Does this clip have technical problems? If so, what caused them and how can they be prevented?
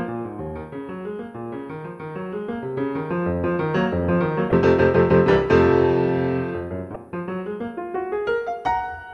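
Yes. Damaged data in the compressed stream produces two brief faults, at 4.50 to 4.53 s and 6.93 to 6.96 s, each about 30 ms long. Corrupted bytes make the decoder misread those frames and lose sync until it finds the next valid header. A plain dropout would leave a gap, and a simple click would be a single sharp tick. Checksummed transfer with error detection, and keeping metadata out of the audio frames, prevents this.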